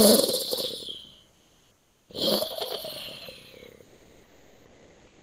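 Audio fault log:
1.31–2.09 s and 3.83 s to the end, comfort noise in place of the background: in both pauses the real background, sitting about 40 dB and then about 34 dB below the loud parts, gives way to a smooth, featureless hiss about 2 dB and about 3 dB quieter. This is likely Opus discontinuous transmission: the sender stopped coding the quiet stretch and the receiver filled it with synthetic noise. On a spectrogram the fine texture vanishes into an even, static wash, and the waveform's noise floor turns flat and uniform.
2.06–2.09 s, onset clipped by the voice detector: the sound returning after the first comfort-noise stretch begins abruptly, its first 30 ms or so missing and its gentle rise gone. The likely cause is the same Opus discontinuous transmission, whose detector noticed the restart late, so comfort noise covered the opening. The waveform jumps from the flat noise floor straight to full amplitude, and the spectrogram shows a hard vertical edge with no build-up.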